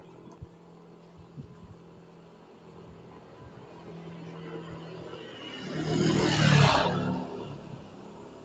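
From start to finish, a noise suppressor applied to music or sounds is working against this audio. Built for speech, it treats steady tones, ambience and decaying tails as noise and pulls them down by something like 10 dB, while sharp onsets pass. Sustained material pumps and thins. On a waveform, attacks stay tall and the bodies behind them collapse. A spectrogram shows held components fading in patches beneath an 8 kHz ceiling, which fits an Opus call link.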